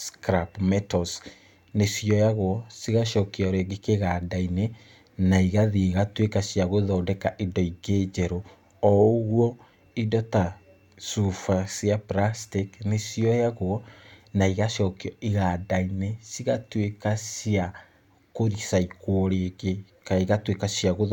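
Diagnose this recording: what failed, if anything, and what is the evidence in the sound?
Nothing failed; no fault is audible anywhere in this recording.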